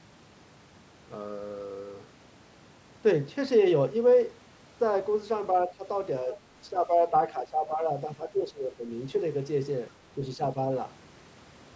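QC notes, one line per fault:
5.67–5.85 s, 6.24–6.38 s, 6.7–7.9 s, 8.06–8.89 s and 10.37–10.57 s, speech suppressed in double talk: with both sides talking at once, the echo canceller likely failed to separate the near talker from loudspeaker echo and attenuated both together. The speech level sinks by up to around 10 dB (only about 5 dB at 6.24 s). It ducks briefly at the short events and, across the two longer stretches, is turned down for most of a second.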